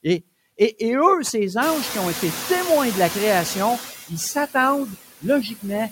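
Noise suppressor artifacts run through the whole speech clip: the processor judges which frequency bands hold steady background and pulls them down frame by frame, by about 14 dB here, so the residual noise dips in the gaps and swells back under the talker. The noise suppressor catching up is heard from 1.62 s to 3.53 s, right after "et eux ces". The room noise jumps by about 22 dB at roughly 1.5 s and then sits about 12 dB below the speech. The suppressor's noise estimate trails that jump, so the louder background first gets only about 5 dB of reduction and then sinks over roughly 1.9 s as the estimate settles on the new level. Speech cut by the noise suppressor occurs between 5.43 s and 5.64 s. The suppressor mistakes part of the voice for background and turns it down along with the noise, by about 10 dB at the deepest point. Around a tenth of a second of sound within that span is affected, so the quiet material there comes across as swallowed and faint rather than cleanly spoken.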